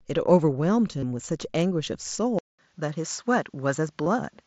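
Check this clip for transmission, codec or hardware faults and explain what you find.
Two kinds of fault are present: concealed Bluetooth headset packet loss, twice, and a mid-recording change of input, likely to a poorer device.

Concealed Bluetooth headset packet loss occurs at 0.99 to 1.03 s and at 4.04 to 4.06 s. Packets on the headset-to-phone radio link went missing. The receiver filled each gap, about 30 ms and then about 22.5 ms, by repeating the best-matching piece of the preceding waveform, which fits a few lost frames in each case. Because the gaps are short, the speech holds at full level with only a brief buzzy, slightly tonal smear and a small warble as real audio resumes.

Input switched to a poorer device: at 2.39 s the recording path most likely changed its input, such as to another microphone or a headset call profile. There is a 200 ms silence at the switch. From then to the end, nothing passes above 8 kHz, so the speech sounds duller and boxier. 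A new background noise floor appears roughly 45 dB below the speech, with no noticeable jump in level. The mSBC headset link carries the audio throughout, with its light graininess on loud sounds.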